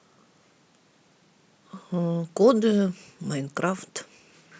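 No technical faults are audible anywhere in the recording.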